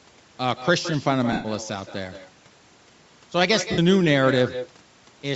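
Speech runs through this clip with every phrase shadowed by a quieter, thinner copy arriving roughly 150 ms later at about 11 dB down. That is echo with no canceller: the far end's loudspeaker feeds its microphone and the sound returns. It differs from room reverberation because it is a distinct delayed repeat, not a smooth decaying tail. The voice also carries a breathy, grainy edge in its upper range, with nothing heard above 8 kHz. This grain follows the speech and disappears in pauses, unlike steady background hiss, and is likely Bluetooth LC3 compression at a rate around 48 kbps. Lost LE Audio frames occur from 1.32 to 1.46 s and from 3.72 to 3.79 s. The decoder repeats the last spectrum with scrambled phase, so these 120 ms and 60 ms stretches become a noisy smear that fades rather than a clean silent dropout.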